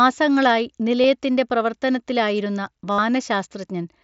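Concealed Bluetooth headset packet loss: a brief gap at 1.03 s is patched from the preceding waveform. From 2.92 to 2.99 s, a longer run of lost packets, about 68 ms, becomes a steady buzzy tone before the audio returns with a slight warble, over the faint graininess of the mSBC link.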